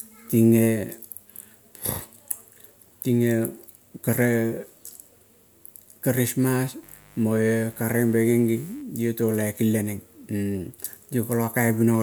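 A speech recording with a burst of mains buzz from 6.83 to 8.82 s, roughly 30 dB below the speech. Switching spikes at twice the 50 Hz mains rate produce a raspy tone that shows as evenly spaced horizontal harmonic lines reaching several kHz, with regular spikes riding the waveform.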